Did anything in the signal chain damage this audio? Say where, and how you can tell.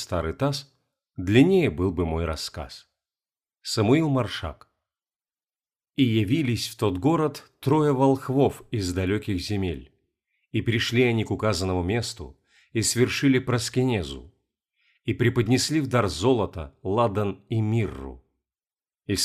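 No, nothing in the signal chain damaged this audio.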